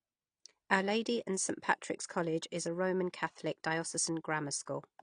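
Throughout the speech, the sound is dull and smeared, with nothing above 9.8 kHz and a fizzy warble, likely AAC compression at a low bitrate around 32 kbps.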